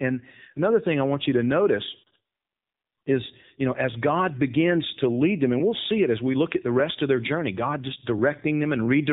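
Throughout, the speech carries plain AMR narrowband mobile codec damage. Nothing passes above 4 kHz. The buzzy, synthetic voice points to a low bitrate near 7.4 kbps.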